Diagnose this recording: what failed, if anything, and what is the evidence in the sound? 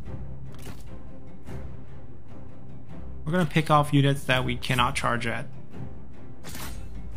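The recording has a DC offset sitting under it for the whole clip, about -32 dBFS. You won't hear it as a sound as such; it shows up as a constant shift of the waveform off the zero line and a steady lump of energy right at 0 Hz. That points to the analogue front end or the converter input, where a bias leaking through eats a little headroom without anything obvious to the ear.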